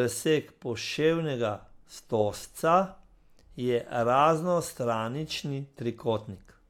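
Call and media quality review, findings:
Call and media quality review findings: no faults heard in this speech clip.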